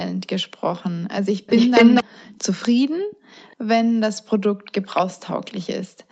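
Between 1.46 and 2.04 s a delayed copy of the speech returns about a quarter-second late, louder than the speech itself. This is an echo leak: likely a loudspeaker on the far side whose echo canceller let part of the played speech reach its microphone. Quieter returns at the same 241 ms delay follow at 2.25–2.41, 2.62–2.68, 3.10–3.16, 3.36–3.56 and 4.64–5.02 s, each well below the speech level.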